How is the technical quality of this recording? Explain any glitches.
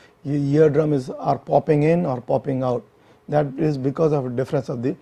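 No glitches or technical faults are audible in this recording.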